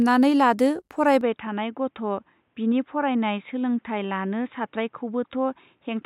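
At 1.21 s the speech abruptly turns dull and boxy and stays that way to the end, with nothing above 3.8 kHz, a level roughly 5 dB lower, and a new, faint noise floor. There is no gap. The likely cause is an input switched to a poorer device.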